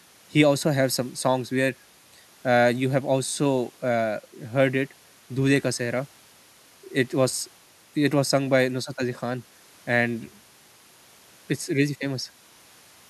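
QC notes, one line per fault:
No faults found in this speech recording. Nothing here needs a QC note.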